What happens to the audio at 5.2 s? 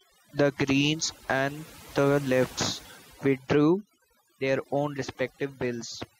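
Overdone noise removal is present at 5.2 s, as it is across the entire clip. An aggressive noise reducer is muting frequency bands that sit near its noise estimate, taking the quieter parts of the speech with them, so the background drops and breaks up into twinkling specks.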